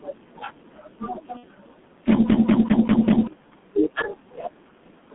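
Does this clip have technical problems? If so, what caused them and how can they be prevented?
Yes. Throughout the clip the speech sounds muffled and hoarse, with blurred consonants and nothing outside roughly 150 Hz to 3.5 kHz. This is heavy G.723.1 codec damage. At 6.3 kbit/s, the codec rebuilds the voice from a coarse model updated only every 30 ms frame. Using a wideband codec at a higher bitrate would prevent this.

From 1.37 to 1.45 s the speech smears into a buzzy tone or coloured noise that fades. This is VoIP packet loss concealed by the speech codec. About 60 ms of audio went missing, consistent with two lost frames. The decoder filled the gap by repeating its last pitch and filter at falling gain. An adequate jitter buffer, forward error correction, or a more reliable network path would prevent the loss.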